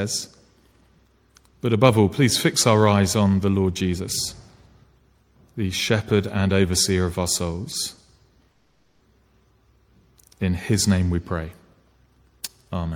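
At 7.94 to 7.99 s the audio shows a short stall from a late packet: the last sound is held for about 30 ms with a faint buzz, then resumes exactly where it left off, so nothing is lost and the timing shifts by just 30 ms. At 8.51 to 9.02 s a call audio freeze follows, much longer than that brief hold. The sound turns into a fading buzz lasting roughly half a second and ends in about 110 ms of silence before picking up from the same point with nothing skipped. The likely cause is packets held up in transit, draining the jitter buffer and adding a 490 ms delay.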